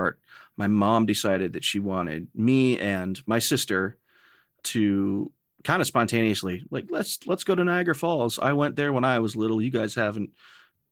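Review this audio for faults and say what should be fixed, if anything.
Nothing stood out on listening to this speech, so there is nothing here that needs fixing.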